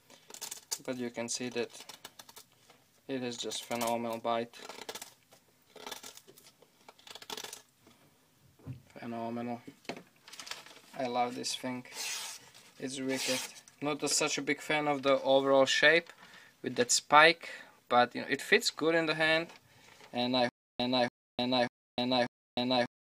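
Stutter with silent gaps from 20.49 s to the end: a 287 ms fragment repeats four times, each followed by about 305 ms of digital silence, likely a stalled stream retrying.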